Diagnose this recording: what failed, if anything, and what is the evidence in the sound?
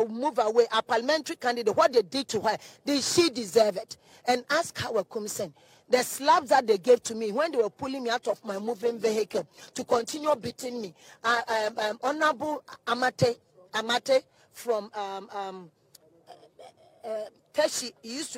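Call bitrate drop at the codec: the bandwidth estimate fell, so from 8.31 to 15.85 s the audio turns coarse and muffled, consistent with roughly 11 kbps.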